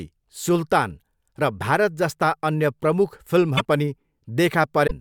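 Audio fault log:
3.57–3.61 s (just after "जस्ता अन्य प्रमुख") and 4.86–4.91 s, broken MP3 bit reservoir: the speech jumps forward with a smeared 40–52 ms blip. That blip spans about two frames, consistent with 24 ms frames, and distinguishes it from a clean edit. The likely cause is dropped frames leaving later frames reading borrowed reservoir bytes from the wrong frame.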